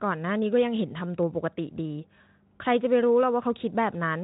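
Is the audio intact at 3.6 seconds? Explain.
Yes, the speech at 3.6 seconds is intact, with no dropout, glitch or other fault at that moment.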